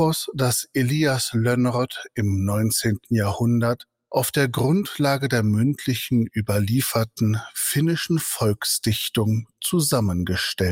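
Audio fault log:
No technical faults can be heard anywhere in the audio, and the signal stays steady throughout with nothing to log.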